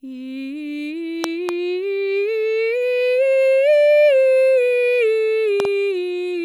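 A music clip with two loud pops, each a double pop, at 1.24 to 1.51 s and 5.60 to 5.67 s. They are likely voltage spikes from a switch or plug, showing as tall waveform spikes and broadband vertical lines on a spectrogram.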